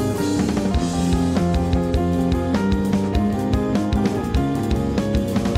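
No technical faults can be heard anywhere here.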